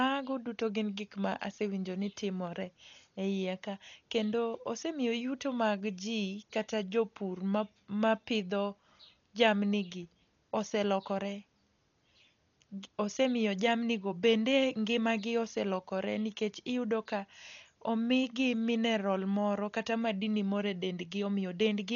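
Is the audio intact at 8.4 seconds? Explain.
No. At 8.4 seconds the speech carries damage that runs through the whole clip. It is likely Dolby Digital compression. Nothing is heard above 7 kHz, so the sound is dull and muffled. The damage is heavy. A rough, fluttering noise clings around voiced tones. This fits an encoder starved of bits, perhaps near 40 kbps. It narrows the band and leaves many frequency lines empty. The decoder then fills those gaps with noise.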